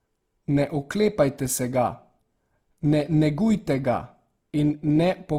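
Throughout, the speech sounds grainy, which is likely Opus compression; its music mode, short of bits near 24 kbps, fills bands with noise.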